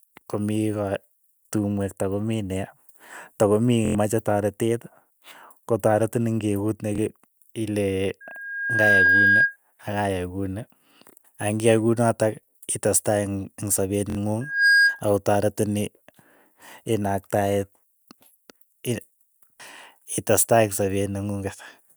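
Bluetooth stutter hits at 3.86 s for about 93 ms, 6.96 s for 23 ms and 14.10 s for 70 ms: late packets make the receiver loop its last slice, so you get a brief buzzy repeat before the sound jumps ahead. Loudspeaker feedback squeal shows up at 8.20 to 9.57 s and again at 14.41 to 15.03 s. The mic hears its own speaker, and a 1.6 kHz tone runs away. The first swells over well under a second to a few dB above the speech, and the second climbs faster to about 10 dB over it.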